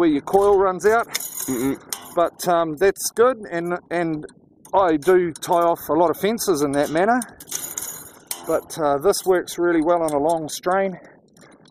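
No technical faults are audible.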